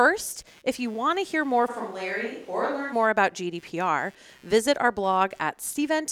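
A speech recording carries computer activity noise for its whole length: a faint buzzing pulse repeating around 150 times a second, sitting roughly 35 dB below the voice and rising and falling independently of the speech. It comes from the computer's changing processor or graphics load disturbing the ground shared with the audio circuit. From 1.70 s, right after "want to hear more", to 2.91 s, where "more about" follows, the voice suddenly turns hollow and roomy, thinner in the bass and a few decibels quieter, with room noise only around 25 dB under the speech. It then snaps back just as abruptly. This is likely a switch to a distant microphone, with a farther pickup such as a camera's filling in briefly for the close one.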